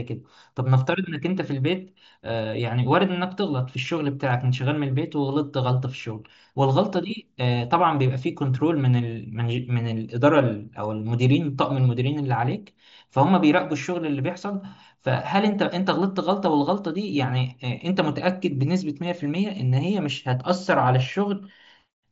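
No faults can be heard anywhere in this speech.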